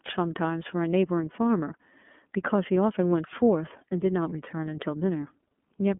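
iLBC codec damage runs throughout this speech: nothing passes above 3.6 kHz, and independently coded frames, consistent with the 30 ms mode, make the sound audibly rough and synthetic.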